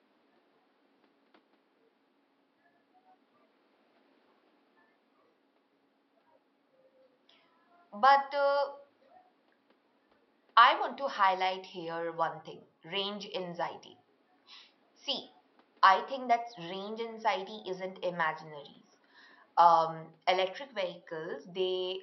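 A speech recording with no technical faults to report. A low background of room noise sits about 41 dB below the speech, as captured by the microphone in the space.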